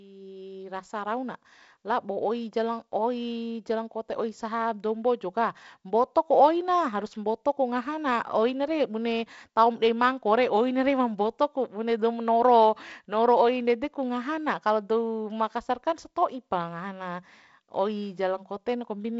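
No technical faults occur in this speech recording at any point, so there are none to describe in time order.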